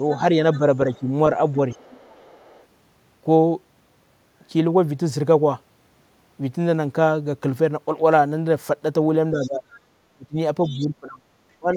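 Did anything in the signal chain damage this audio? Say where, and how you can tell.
Yes, in the call-processing stage. The first fault is the other side's voice leaking through: a faint second voice sits under the talker at 0.1 to 1.0 s, 1.72 to 2.66 s, 9.42 to 9.49 s and 10.65 to 10.87 s, some 20 to 30 dB below the main speech. This is likely far-end audio from a loudspeaker that the echo canceller did not fully remove. Crosstalk or a mixing error would not come and go in these scraps.

The second fault is speech suppressed in double talk. Between 0.59 and 1.07 s the talker's level dips by roughly 10 dB for only about a tenth of a second. From 9.31 s to the end at 11.8 s the cuts go much deeper, around 25 dB, and total about a second. These dips coincide with the leaked voice, so the likely cause is the canceller ducking both sides at once. Network dropouts would go to silence and would not line up with the far end.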